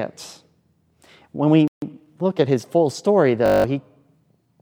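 At 1.68 s the speech cuts out into silence for about 145 ms, resuming at 1.82 s. This playback stall was likely the player running short of data or having its thread blocked, leaving the output empty until it recovered.

From 1.82 s to 2.78 s the speech sounds hurried, about 1.15 times normal speed, yet its pitch stays put. This is time-compressed catch-up: the player trims small pieces and cross-fades them to clear the backlog the stall built up.

At 3.46 s a steady 50 Hz buzz replaces the speech until 3.64 s. A single 20 ms fragment repeats exactly nine times. This system hang loop comes from the machine or driver freezing while the sound hardware kept replaying its ring buffer, losing around a fifth of a second of audio.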